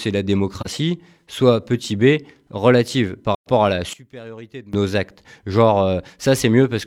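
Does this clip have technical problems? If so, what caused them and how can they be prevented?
Yes. AAC frame loss with muting leaves two soft-edged gaps: 0.60 to 0.67 s (about 43 ms, which fits one lost frame) and 3.34 to 3.49 s (about 128 ms, consistent with three consecutive frames). The decoder zeroes the missing spectrum, and the overlapping transform windows fade the sound out and back in. Preventing this calls for a more robust transport, using retransmission or forward error correction.

From 3.93 to 4.73 s the sound drops by about 20 dB and becomes faint. The likely cause is one channel inverted: with reversed polarity on one side, the shared content cancels when the stereo pair is summed to mono. Checking polarity and phase correlation on every stereo path before mono summing prevents it.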